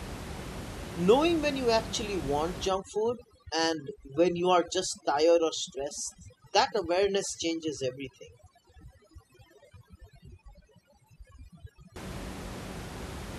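From 2.68 to 11.96 s, overdone noise removal gates individual frequency bands near the noise estimate, leaving a broken-up background of twinkling specks, and a spectrogram of scattered isolated bins against near-black gaps.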